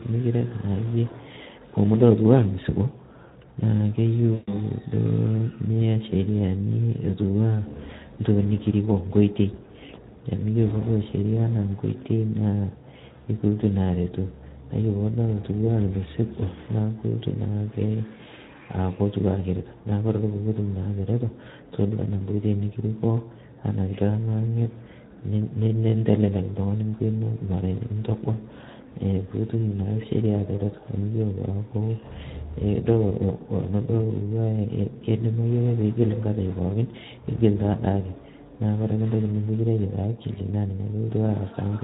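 Speech, coded throughout with the Speex codec. The damage is plainly audible. The voice sounds coarse, hoarse and noisy, because the codec has too few bits to describe the excitation properly. The sound fits a bitrate around 11 kbps. From 4.33 to 4.54 s there is VoIP packet loss concealed by the speech codec. About 140 ms of audio goes missing, which fits roughly seven 20 ms frames. The decoder fills the gap by repeating its last pitch and filter at falling gain. That gives a fading smear, and the speech stays weak briefly after packets resume.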